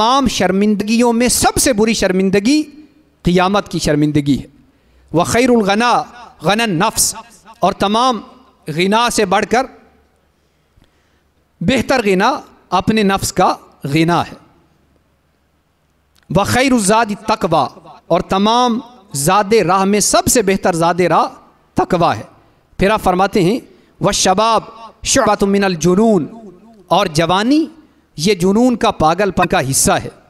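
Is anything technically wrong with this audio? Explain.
Yes. Damaged data in a compressed stream occurs three times: 0.77–0.82 s, 25.22–25.27 s and 29.40–29.45 s. Corrupted bytes make the decoder misread frames and lose sync until it finds the next header, so each 44 ms disruption sounds like a brief chirp or blip.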